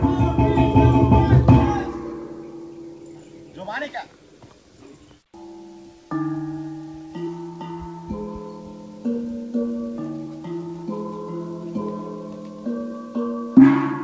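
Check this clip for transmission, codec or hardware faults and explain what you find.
No transmission, codec or hardware faults can be heard anywhere in the clip. The sound has come through a call path, with nothing above 8 kHz, which fits a wideband call codec such as G.722.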